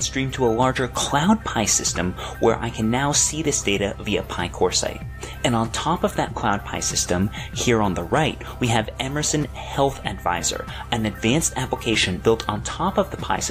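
Mains hum runs through the whole clip: a steady 50 Hz tone with a few low harmonics, sitting roughly 20 dB below the signal. A ground loop or nearby transformer has let the power line bleed into the signal path, leaving a constant drone underneath everything.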